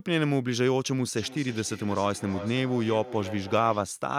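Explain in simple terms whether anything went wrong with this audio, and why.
From 1.14 s to 3.96 s, the speech returns as a fainter, thinner, ringing copy about every third of a second. This is feedback echo between two devices: one device in the room plays the call aloud, and the other's microphone sends it round again.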